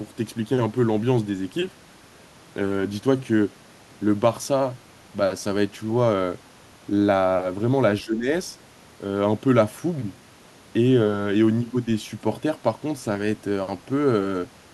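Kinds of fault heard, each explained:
Speech suppressed in double talk: From 8.03 to 8.28 s the speech drops by roughly 10 dB, likely an echo canceller turning down speech it mistook for loudspeaker echo.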